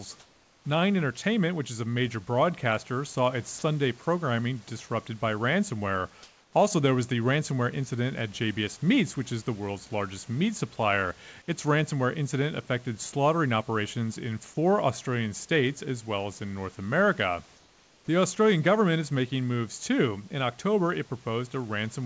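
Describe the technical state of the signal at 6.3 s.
At 6.3 s the room background gives way to a steady, featureless hiss from 6.23 to 6.53 s, likely comfort noise in place of the background after discontinuous transmission paused. On a spectrogram the detailed noise floor becomes a smooth, uniform band below 8 kHz, about 1 dB quieter.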